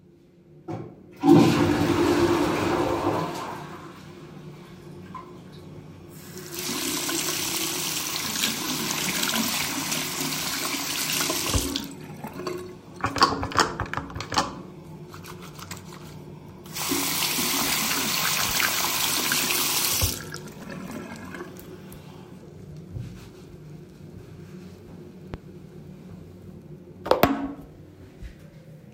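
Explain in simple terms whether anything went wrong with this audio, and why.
Two loud pops cut in: a quick double one around 18.45 to 18.53 s, and a single one at 25.34 to 25.37 s. Each is a sharp thump sitting well above the sound, which keeps going underneath. It's likely a sudden electrical jolt, like a plug or switch.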